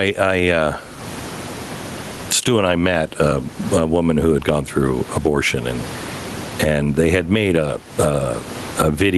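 Across the whole speech clip there is gain pumping: the room noise sits about 34 dB below the speech, and the level swings by something like 25 dB. The likely cause is gain set far too high feeding a fast limiter or compressor. On a waveform the envelope looks flattened and squashed.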